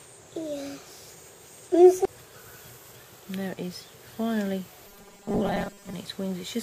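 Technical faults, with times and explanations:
4.87 to 5.94 s, robotic sound from repeated short buffers: most of this stretch turns into a rigid metallic buzz at 200 Hz, likely from a 5 ms chunk being replayed while fresh audio is skipped. A spectrogram shows evenly spaced horizontal harmonic stripes, and the waveform shows identical 5 ms cycles.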